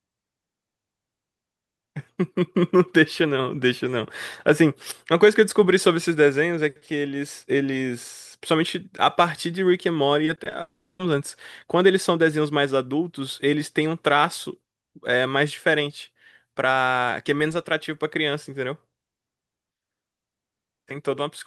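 From 10.25 to 10.53 s the speech turns choppy and robotic. This is repeated packet loss: several short holes, none longer than about 20 ms, are each bridged by repeating the preceding sound. On a spectrogram, smeared, stuttering harmonic fragments interrupt the normal formant patterns.

From 10.61 to 11.01 s a long network dropout is the likely cause of a 0.4 s gap. The last sound is stretched into a fading buzz for roughly 0.3 s, then about 80 ms of silence follows. The waveform shows a decaying envelope collapsing to flat before speech resumes with that stretch missing.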